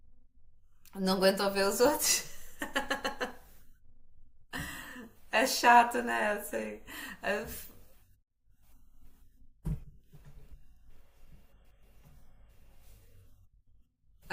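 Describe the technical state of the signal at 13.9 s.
At 13.9 s the speech carries clock slip clicks, present from 0.12 s to the end. The likely cause is two unsynchronised clocks differing by a few hundred parts per million. A single sample slips roughly every 70 ms, heard as a faint, fast, regular ticking.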